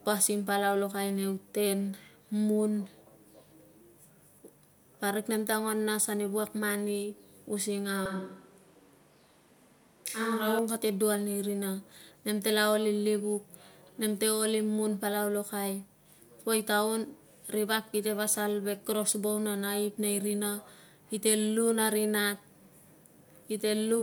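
From 8.06 to 10.59 s the speech suddenly turns roomy and hollow, thinner in the bass, with room noise around 35 dB below it but the level barely shifting, then snaps back. That's a switch to a distant microphone, likely because the close mic's signal dropped out.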